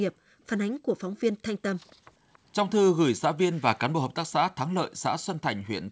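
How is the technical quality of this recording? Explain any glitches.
Two kinds of glitch show up in this speech clip, both from the echo-control side of a call. The whole thing is band-limited to 8 kHz, which fits a wideband G.722 call path.

The background gated by the echo canceller happens twice: from 0.14 to 0.4 s, and again from 1.96 to 2.27 s. Each time the room tone suddenly drops away by about 40 dB for roughly a third of a second and then pops back. The canceller decided the far-end loudspeaker was active and clamped the mic hard, taking the ambience with it.

There's also a faint echo leak, at 1.75 to 1.95 s and 2.33 to 2.39 s. You hear a ghostly copy of the voice trailing 280 ms behind, very quiet, well below the main speech. It comes through as short scraps rather than a sustained echo. The likely cause is the far side's echo canceller not fully removing what its mic picked up from its own loudspeaker, so a bit got sent back down the line.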